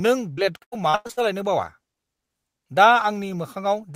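From about 0.33 s to 1.19 s the speech runs into repeated packet loss, and it turns robotic. Over that stretch there are seven separate gaps, the longest about 95 ms, where audio never arrived in time. Each hole got patched by stretching out the last bit of sound, so close to half the span, around 0.38 s in total, is filler. You hear it as choppy stutter with chunks of the speech simply gone.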